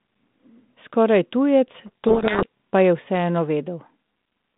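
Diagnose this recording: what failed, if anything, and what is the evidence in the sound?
Between 1.86 and 2.47 s a codec payload misread at the codec stage buries the speech in harsh, rasping distortion. A spectrogram shows hash across the 150 Hz to 3.7 kHz band, and the waveform turns ragged. The decoder reads 32 kbit/s G.726 code words in the wrong bit order, so every ADPCM step decodes wrongly.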